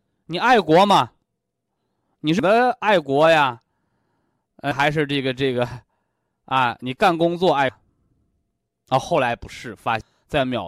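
At 2.39, 4.72, 7.69 and 10.01 s, damaged data in a compressed stream makes the decoder lose sync and search for the next frame header.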